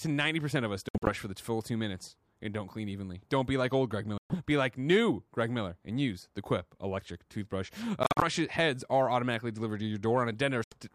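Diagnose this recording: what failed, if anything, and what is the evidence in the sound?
Silent gaps at 0.89, 4.18, 8.03 and 10.64 s, speech resuming as if it played on: likely Bluetooth dropout, with late packets discarded on the wireless playback link.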